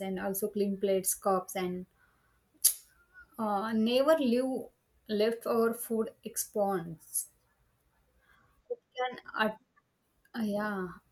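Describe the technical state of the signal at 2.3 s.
At 2.3 s the speech signal is intact, with no audible fault at that moment.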